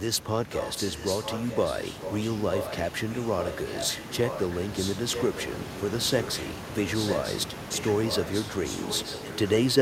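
From 0.51 to 5.82 s and again from 5.98 to 9.74 s, a delayed copy of the speech trails it by 940 ms at roughly 10 dB down, heard as a displaced repeat. This is echo leak, likely from a far-end loudspeaker whose echo canceller left residual signal. Room noise sits about 11 dB below the speech.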